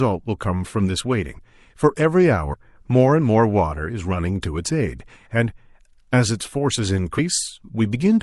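Throughout the speech there is audible MP3 compression damage, likely from a low-bitrate encode consistent with 64 kbps. The encoder lets weak frequency components drop in and out between frames, giving a watery, swirling texture with smeared consonant attacks.

At 1.37 s, 2.52 s and 7.17 s the speech jumps forward as compressed frames are skipped, losing about 50 ms, 100 ms and 50 ms respectively, which fits two, four and two frames of 26.1 ms. Overlapping frames blur each join into a short smeared blip.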